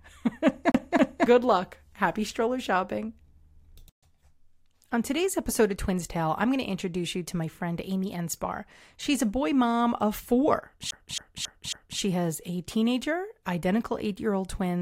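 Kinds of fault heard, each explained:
CD stuck on one turn: a fast, even stutter replaying the same 0.27 s of speech, twice near the start and four times after "boy mom of four", as a scratch keeps throwing the laser back.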